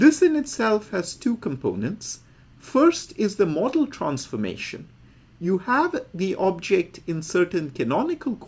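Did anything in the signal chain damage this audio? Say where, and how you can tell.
No, nothing in the signal chain damaged this audio.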